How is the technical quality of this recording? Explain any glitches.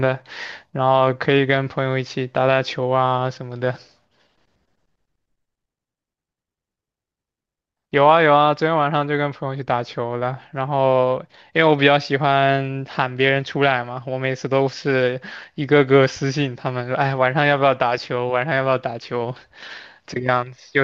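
No technical faults were heard anywhere in the speech recording, so there are no glitches to explain.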